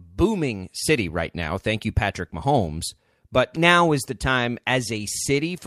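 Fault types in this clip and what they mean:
CD skip: the laser jumped to another turn of the disc's spiral, so at 3.56 s, just before "now is", the speech mutes for a few milliseconds and resumes elsewhere. Unlike a plain dropout, the sound doesn't pick up where it stopped.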